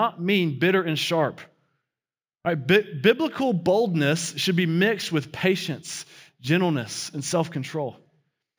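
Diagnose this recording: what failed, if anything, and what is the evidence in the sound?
Sample-rate conversion failed: imaging from linear upsampling, throughout the speech. Straight-line interpolation from 16 kHz to 44.1 kHz dulls the top and leaves a mirrored copy, roughly 25 dB down, at 8 to 16 kHz, heard as metallic shimmer on sibilants. Unlike aliasing, nothing folds below 8 kHz.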